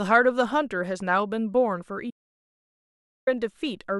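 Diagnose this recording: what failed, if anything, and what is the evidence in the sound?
Audio dropout to silence, 2.11 to 3.27 s: speech cuts mid-flow into 1.16 s of silence with no room tone, unlike a noise gate. Likely a lost input link.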